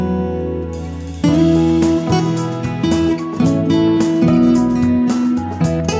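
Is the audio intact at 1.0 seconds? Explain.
Yes, the audio is intact at 1.0 seconds, with no fault at that moment.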